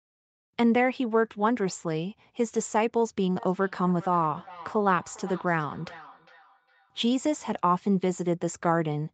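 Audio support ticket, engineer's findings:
Feedback echo between two devices, 3.36 to 7.03 s: speech returns roughly every 0.4 s, peaking about 21 dB below speech, each repeat thinner. Discrete fixed-interval repeats, unlike diffuse room reverb.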